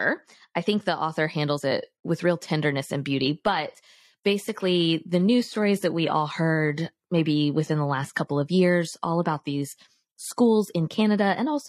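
At 3.17 s the speech turns abruptly duller, with nothing above 14.9 kHz and more codec artefacts, without any gap. This is an adaptive stream at a lower bitrate. The player switched down mid-stream, which fits AAC at 96 kbit/s giving way to HE-AAC at 24 kbit/s.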